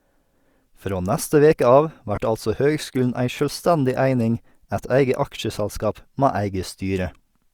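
At 2.16 s, just after "neste veke av", a short run of Bluetooth LE Audio frames was lost, and the LC3 decoder covered the gap by repeating the last good spectrum with its signs randomised. The gap lasts about 15 ms, which fits two lost frames, too short for the concealment to begin fading. The speech briefly turns into a grainy, noisy smear where its tonal detail should be. The light lossy compression underneath is a separate matter from this dropout.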